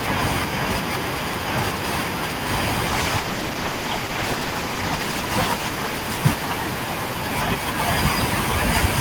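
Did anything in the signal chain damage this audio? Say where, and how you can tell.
Yes. Call bitrate drop at the codec, from 2.88 s onward: encoding falls from 64 to 14 kbps, so speech turns coarse and muffled, its high frequencies cut.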